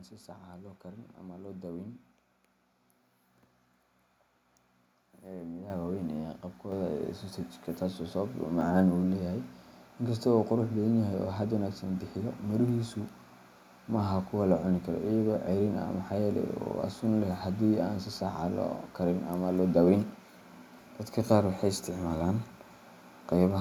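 The call software judged the microphone too quiet and raised the device's input volume in a single step, twice. At 5.7 s the microphone volume stepped up by about 9 dB, and at 6.72 s it stepped up again by about 4 dB. Each change is instant, so the speech and the background noise behind it jump louder together, with no fade. After the second step the level sits about 13 dB above where it began.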